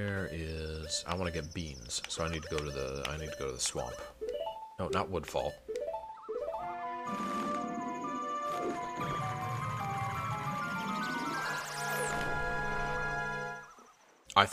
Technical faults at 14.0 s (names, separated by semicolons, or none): none